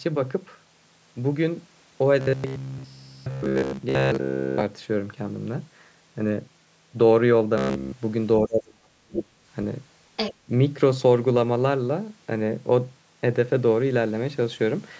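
From 2.21 to 4.63 s the speech takes on robotic sound from repeated short buffers. A steady buzz at 66.7 Hz sits on the voice, matching a repeated segment of about 15 ms, and most of that stretch is repeated material rather than fresh audio. The likely cause is new audio arriving too late, so the playback side loops its last buffer while real signal is skipped. The result is a rigid, metallic drone that still roughly follows the speech contour. A shorter burst with the same 66.7 Hz buzz appears at 7.58 to 7.94 s. There, the whole stretch is loop output with no fresh audio getting through.

From 8.4 to 9.4 s the talker's level collapses in a pattern typical of speech suppressed in double talk. Over about a second the voice dips, at its deepest by around 35 dB. This likely happened because the far end was speaking at the same time. The echo canceller then could not tell the local talker from loudspeaker echo and attenuated both.

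Right at the end of that dip, 9.16 to 9.22 s, a brief scrap of the other side's voice leaking through is audible. It returns at 10.16 to 10.34 s. Each fragment sits only a few dB below the talker. The likely source is far-end playback reaching the microphone that the echo canceller failed to remove. The band-limited character, with nothing above 8 kHz, comes from ordinary call microphone processing.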